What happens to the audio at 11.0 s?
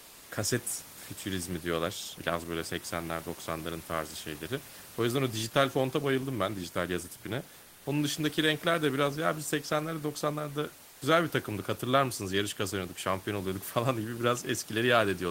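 Right around there, from 10.89 to 11.01 s, the real room background drops out for about 120 ms and is replaced by comfort noise, just before "güzel bir takımdık hatırlar". The cause is likely discontinuous transmission in the Opus encoder: it treated the gap as silence, stopped sending, and the receiver filled in synthetic noise. You hear the room noise, sitting about 23 dB under the speech, turn flat and featureless and about 1 dB quieter.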